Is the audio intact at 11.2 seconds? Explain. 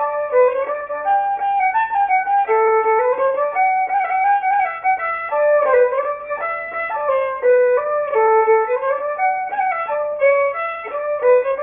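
No. At 11.2 seconds, as everywhere in the clip, the sound is gritty and metallic, with harsh false tones crowding up against a hard ceiling near 3 kHz. This is aliasing: the sample rate was cut without first filtering out what lay above half the new rate, which fits a drop to about 6 kHz. Content above 3 kHz folds back into unrelated pitches, heard at roughly 25 dB below the signal.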